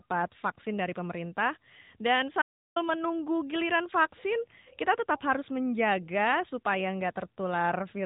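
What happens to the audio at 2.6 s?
At 2.6 s the speech is in an audio dropout to silence running from 2.42 to 2.76 s, about 0.34 s in total, ending just before "menunggu giliran vaksin kita". The signal most likely stopped arriving, through a lost link, a disconnected device or an accidental mute, while recording carried on writing silence. The speech cuts off abruptly and resumes mid-flow. Unlike a noise gate or a codec's packet-loss concealment, which would leave faint room tone or smeared, repeated fragments, this gap is dead silence. Around it, the narrowband AMR-NB mobile codec's muffled, band-limited character continues on both sides of the gap.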